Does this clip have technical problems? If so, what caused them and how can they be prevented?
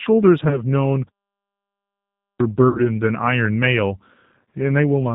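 Yes. The speech runs through the G.729 codec throughout, at 8 kbit/s. Everything above 4 kHz is missing, and the voice sounds plainly rough and synthetic because it is rebuilt from a filter, pitch predictor and sparse pulses. A wideband codec such as G.722 or Opus avoids this.

VoIP packet loss concealed by the speech codec occurs twice. From 0.48 to 0.62 s, about 30 ms of audio is missing, which fits one lost packet. From 2.69 to 2.81 s, about 60 ms is missing, which fits two lost packets. The decoder extends its last pitch and filter at falling gain, so the sound turns into a buzzy tone or coloured noise that fades, then stays weak until the following frames rebuild it. A larger jitter buffer, forward error correction or prioritised voice traffic reduces these gaps.

A playback stall runs from 1.09 to 2.40 s. The output goes silent for about 1.3 s mid-flow and then resumes. The likely cause is that the player ran out of buffered data or its audio thread was blocked. 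Deeper output buffering and a real-time-priority audio thread prevent it.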